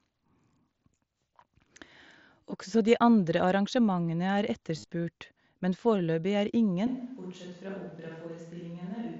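At 4.77 to 4.84 s, just after "de andre arrangementene er", concealed Bluetooth headset packet loss: lost packets were patched with repeated waveform, giving brief buzzy, periodic striations on the spectrogram.

From 6.87 s to the end, after "men foreløpig er", a switch to a distant microphone, likely: the waveform drops roughly 10 dB, with hollow, roomy tone, thinner bass and a raised noise floor.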